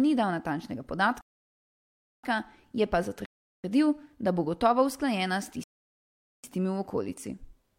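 A speech clip with three rebuffering stalls: the audio drops to silence at 1.21–2.24 s, 3.26–3.64 s and 5.64–6.44 s, then picks up exactly where it left off. The player ran dry and waited for data, adding about 1.02, 0.38 and 0.80 s.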